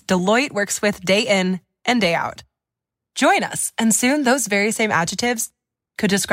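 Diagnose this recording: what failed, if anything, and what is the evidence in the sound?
Nothing failed; no stage in the chain, from capture to playback, leaves any audible trace on the speech.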